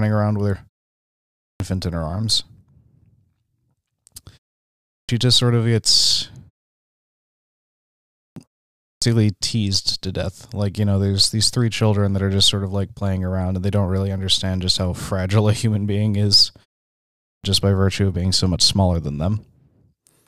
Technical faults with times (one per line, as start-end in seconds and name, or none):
1.40-1.60 clipped start after a pause
4.89-5.09 clipped start after a pause
8.15-8.36 clipped start after a pause
8.81-9.02 clipped start after a pause
17.24-17.44 clipped start after a pause